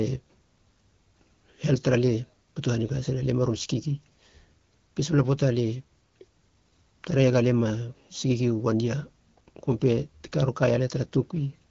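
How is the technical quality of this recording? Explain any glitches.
No glitches to report: the speech is carried over an AMR wideband (HD Voice) link at a rate that sounds like 12.65 kbit/s, where speech stays clear and the coding leaves only light traces.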